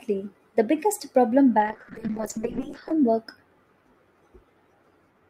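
Just after "biggest problem", at 1.63 s, a call bitrate drop sets in and lasts until 3.02 s. The encoder's target falls from 64 kbps to 8 kbps and stays at that floor for about 1.3 s. At 8 kbps the codec has too few bits to describe the spectrum, so it quantises coarsely and discards the upper band. The speech turns muffled and watery until the rate recovers near 3.02 s.

At 2.63 s, inside the low-bitrate stretch, a repeated buffer occurs. Fresh audio failed to reach the output in time, so the device replayed its last block twice more, which fits a buffer of about 5 ms. Each replay meets the next with a hard join. With blocks that short, the effect is a brief buzzy click rather than an audible stutter, and essentially no audio is lost.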